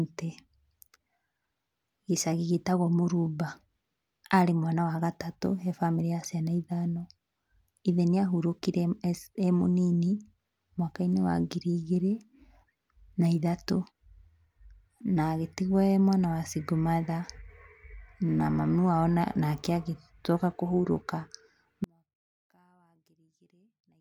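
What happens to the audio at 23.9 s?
At 23.9 s the speech has nearly vanished. From 21.84 s to 24.00 s the level falls by about 38 dB, leaving a faint trace. This is likely one channel inverted: one side's reversed polarity cancels the shared centre when summed to mono.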